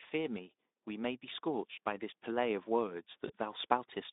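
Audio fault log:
0.11–4.01 s, automatic gain rising: the AGC decides the input's too quiet and slowly pushes gain up about 6 dB, so speech and background swell together.
3.27–3.31 s, VoIP packet loss concealed by the speech codec: a 20 ms gap, fitting one lost frame, gets patched by the decoder's extrapolation, giving a brief smear of buzzy tone or coloured noise.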